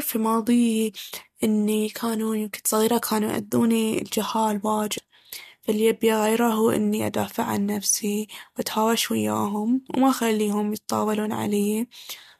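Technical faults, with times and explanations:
4.97 s, damaged data in a compressed stream: a brief glitch cuts into the speech where corrupted bytes made the decoder misread a frame and search for the next valid header.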